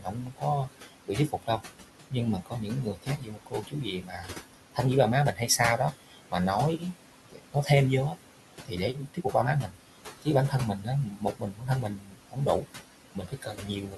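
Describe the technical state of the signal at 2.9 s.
At 2.9 s the signal falls inside a stretch of speech cut by the noise suppressor, running from 0.0 to 4.79 s. The suppressor misread parts of the speech as noise and pulled them down by up to about 18 dB, so soft consonants and word endings sound swallowed, about two seconds of material in total across that span. The same moment also carries noise suppressor artifacts, present through the whole clip. The processor lowers the bands it treats as steady noise by about 18 dB, frame by frame. The room noise, which sits about 12 dB below the speech, therefore dips in the gaps and rises again under the speech.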